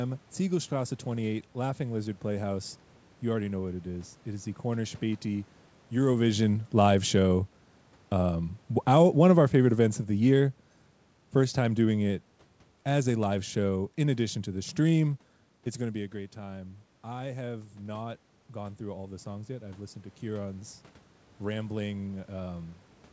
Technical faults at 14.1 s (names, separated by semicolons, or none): automatic gain falling